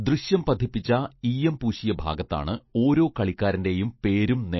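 From start to finish the speech sounds watery and swirly, with smeared consonants and nothing above 5.8 kHz. That's likely MP3 compression starved of bits, pointing to a rate near 28 kbps, so the encoder chopped the treble and let weak detail flicker in and out.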